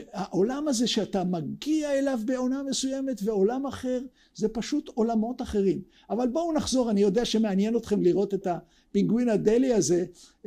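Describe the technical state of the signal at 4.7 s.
At 4.7 s the signal is intact, with no dropout, clipping, distortion or other technical fault audible at that moment.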